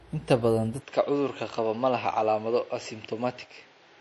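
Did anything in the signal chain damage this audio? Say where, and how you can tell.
Yes. At the codec stage, the whole clip has plainly audible watery, swirly artefacts and nothing above 11.5 kHz, which fits MP3 at around 48 kbps. Starved of bits, the encoder drops weak frequency lines frame by frame and cuts the treble.

At 0.80 s the top end drops further to 7.6 kHz and stays there, with new background noise about 40 dB under the signal, no gap, and roughly unchanged level. Most likely the input switched to a poorer device, at the driver or capture stage.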